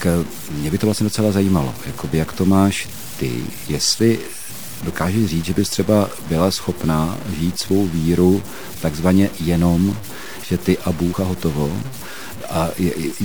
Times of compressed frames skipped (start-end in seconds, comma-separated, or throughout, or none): 2.13, 11.13